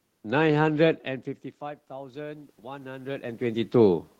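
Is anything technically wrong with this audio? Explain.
Yes. From 1.6 s to 3.78 s there is automatic gain rising. The level reaching the microphone falls by about 19 dB, and the gain control responds by slowly raising its gain by about 6 dB. Because the gain applies to everything, the room noise swells along with the speech. On a waveform the envelope gradually thickens across those two seconds. On a spectrogram the noise floor brightens across all frequencies together. The talker's movements around 1 s and 3 s are natural level changes.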